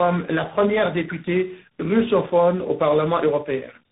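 Tandem speech coding runs throughout, with speech decoded and re-encoded across roughly three codec stages, which fits a CVSD final link: rough, muffled, warbly speech, nothing above 3.8 kHz.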